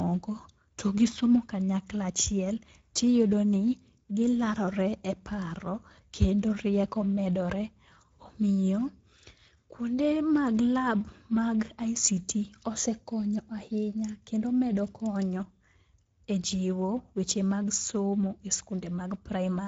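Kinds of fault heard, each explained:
Speex codec: Throughout the speech, the voice carries a plainly audible hoarse, noisy grain from a CELP coder with too few bits for the excitation, which fits a mid-quality setting near 16.8 kbps; unlike MP3-style damage, there is no swirling or pre-echo.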